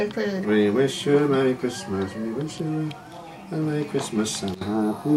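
A nearby DECT transmitter's radio bursts, sent every 10 ms, are being rectified in the audio path, adding DECT cordless phone buzz from 3.81 s to the end: a faint, thin 100 Hz buzz rich in harmonics.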